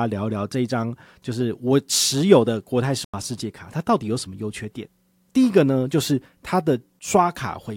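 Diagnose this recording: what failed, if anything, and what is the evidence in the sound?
The codec decoder rejected a corrupt frame, which was muted: the speech cuts abruptly to silence from 3.04 to 3.14 s, consistent with one lost frame, with timing intact.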